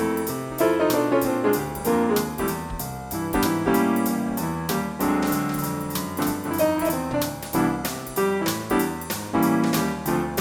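A second capture path running behind the first, or an edit holding two copies out of step, is the likely source of a doubled audio track from 5.27 to 6.89 s. A full-band copy trails by roughly a third of a second, a few decibels quieter, without decay or room colour, and starts and stops abruptly.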